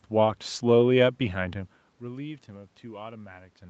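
No technical faults can be heard in this speech clip.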